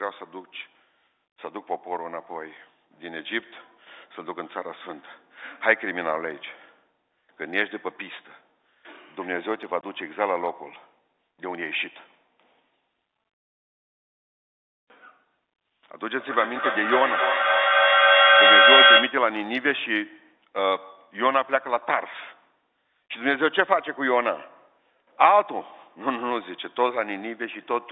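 Speech heard through a telephone-band path. Packet loss filled with silence cuts a hard-edged 20 ms hole from 9.81 to 9.83 s, which fits two 10 ms packets going missing. The hard edges and dead-silent gap set it apart from a fade or level dip. From 15.94 to 19.36 s there is feedback echo between two devices: the sound returns at a fixed interval of about a third of a second, getting thinner and more ringing each time. Unlike room reverb, these repeats are distinct and pile up to about 7 dB above the speech rather than dying away.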